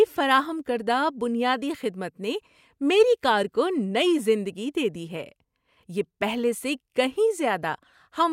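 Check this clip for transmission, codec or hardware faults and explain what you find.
No faults detected.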